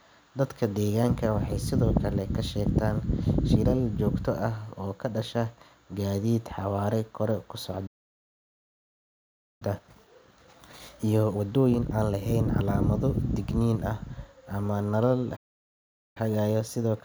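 At 7.86 s the speech cuts out mid-flow and the output sits in silence until 9.62 s, a gap of about 1.74 s. A second, shorter dropout follows the words "ah ama nalal", running from 15.36 s to 16.17 s, roughly 0.8 s. Both are playback stalls, most likely the player running out of buffered data or having its audio thread blocked, so nothing reached the output until it recovered.

Straight after each stall the speech comes back hurried but at its normal pitch. From 9.62 s to 12.62 s it runs at 1.25 times normal speed, and from 16.17 s to the end at 1.15 times. This is time-compressed catch-up. The player trims its backlog by removing small slices of audio and cross-fading across the joins, which causes the rushed pace.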